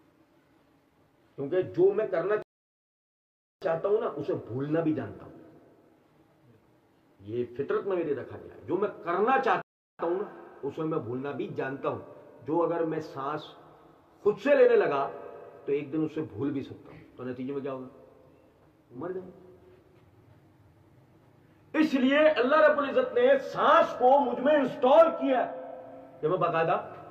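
The audio drops into dead silence twice, from 2.42 to 3.62 s and again from 9.62 to 9.99 s, and each time picks up exactly where it left off, with nothing skipped. These are rebuffering stalls: the player used up its downloaded audio and paused until more data arrived. The first gap adds about 1.19 s to the running time and the second about 0.37 s.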